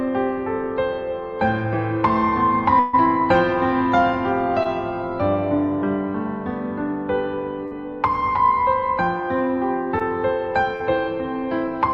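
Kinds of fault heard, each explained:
Burst of packet loss: Around 140 ms of audio, from 2.79 to 2.95 s, never arrives. The receiver stretches the last sound and fades it before playback jumps ahead. A spectrogram shows the final frame's pattern smeared flat and dimming, and the waveform shows a decaying, repetitive stretch.
Short concealed packet loss: Holes of 20 to 40 ms at 4.63, 7.67, 9.99 and 10.76 s are patched by extending the preceding sound and blending back, heard as a quick smear or wobble. Spectrograms show brief blurred bands.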